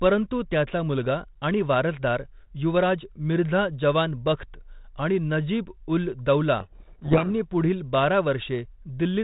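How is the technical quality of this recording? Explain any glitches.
The speech passes through a 32 kbit/s G.726 telephone channel, band-limited below 4 kHz with light coding damage, and contains one glitch. A codec payload misread from 6.6 to 7.49 s, just before "पुढील बारा", occurs because the decoder reads each G.726 code word's bits in reversed order, burying the speech in harsh distortion.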